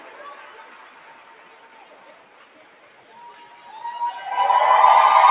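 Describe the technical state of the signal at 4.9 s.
At 4.9 s the sound still carries the noise suppressor applied to music or sounds that runs through the whole clip. It mistakes held tones and decaying tails for noise and pulls them down by around 20 dB while attacks pass, so the sound pumps and thins. Unlike packet-loss gaps, it sinks rather than cuts out, inside the call path's 4 kHz band limit.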